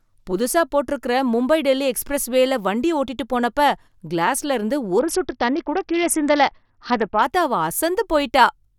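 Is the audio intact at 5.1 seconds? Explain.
No. At 5.1 s the speech is inside a Bluetooth SBC bit pool drop from 4.99 to 7.22 s. The encoder starved its sub-bands of bits, consistent with a bit pool falling from 31 to 7 near 61 kbps, so the treble dulls and gritty quantisation noise rises.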